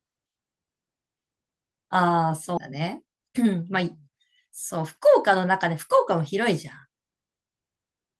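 At 2.57 to 2.59 s the speech jumps abruptly forward with no gap, and close to half a second of sound is simply gone. This is a skip ahead: that stretch was dropped, in transit or by an overflowing jitter buffer, and the audio on either side was joined directly.

From 2.71 to 4.15 s the speech sounds hurried, running at about 113% speed with its pitch unchanged. This is a jitter buffer speed-up: the receiver repeatedly cut tiny pitch-period-sized slices, about a fifth of a second in total, to shrink excess buffered delay.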